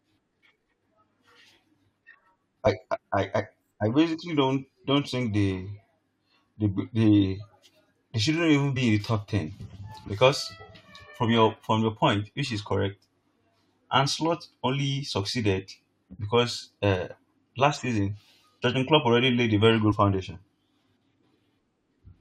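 Compressed frames skipped at 2.65 s, 8.76 s and 19.91 s, the last just after "already laid a very". At each point the decoder never played one or more whole frames, so the speech jumps ahead. At 2.65 s about three frames of roughly 21.3 ms each drop out, roughly 70 ms of audio. The later two each lose about one frame, around 20 ms.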